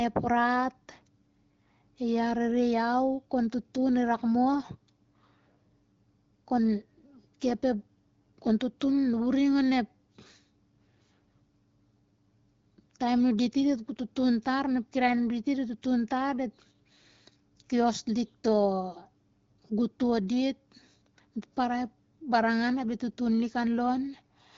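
No technical faults occur at any point in this speech clip, so there is nothing to describe in time order.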